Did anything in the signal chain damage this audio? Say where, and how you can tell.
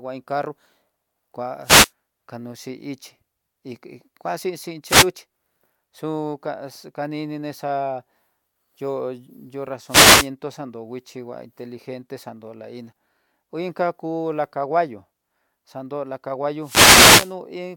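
Yes. The radio link from an analogue FM wireless microphone fades as reflected paths cancel, letting receiver noise swell into wireless microphone noise hits: bursts of static swishing over the speech at 1.63–1.91, 4.84–5.09, 9.87–10.29 and 16.61–17.35 seconds, the last lasting about 0.75 s.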